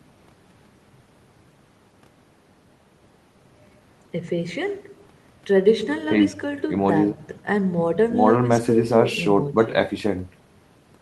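No technical faults turn up in the speech, which comes through a call codec and jitter buffer working as intended, carrying the codec's ordinary coding texture and a high-frequency ceiling at 12 kHz.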